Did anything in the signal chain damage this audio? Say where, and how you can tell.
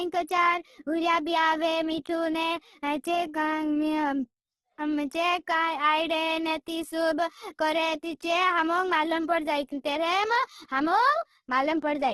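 Yes, the codec: grainy, rough speech throughout and nothing above 12.2 kHz, likely heavy Opus compression in CELT mode noise-filling starved bands at around 12 kbps.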